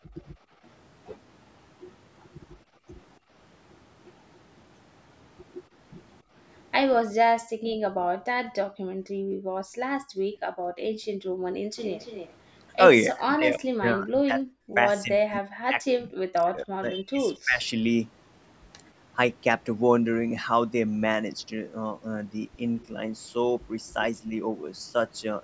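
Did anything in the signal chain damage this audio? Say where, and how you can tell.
Yes. The damage sits in the call processing stage, in the echo canceller.

Background gated by the echo canceller: the room sound drops out at 0.0–0.52 s, 2.69–2.83 s and 7.45–7.72 s, and through most of 8.65–11.76 s. The dips go as deep as about 35 dB. The canceller is clamping the microphone while far-end audio plays, and the ambience returns once it releases.

Echo leak: from 11.76 to 12.33 s a faint delayed copy of the speech appears. It trails by 279 ms at about 15 dB below the direct level. The likely cause is residual loudspeaker pickup that the canceller failed to subtract and passed back.

Speech suppressed in double talk: between 13.08 and 17.62 s the talker dips and breaks into pieces, for roughly three seconds in total, with drops near 40 dB. The likely cause is both sides talking at once, which the canceller misread as echo, so it attenuated the near-end speech.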